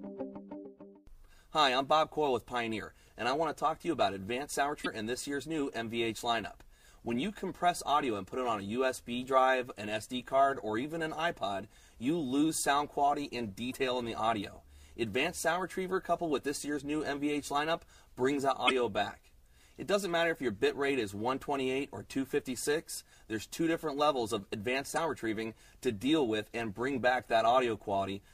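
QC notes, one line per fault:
0.62–0.66, 4.82–4.87, 13.70–13.75, 18.67–18.71 and 24.94–24.98 s, damaged data in a compressed stream: five brief disturbances of about 40 to 44 ms each, where corrupted bytes made the decoder misread or reject frames and hunt for the next frame header. Each is heard as a chirp, squawk, click or short hole rather than a steady noise.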